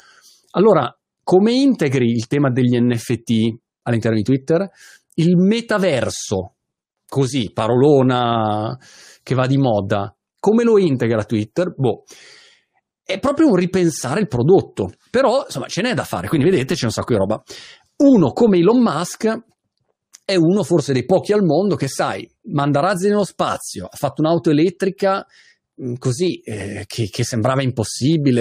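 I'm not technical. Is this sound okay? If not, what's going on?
Yes, it sounds fine.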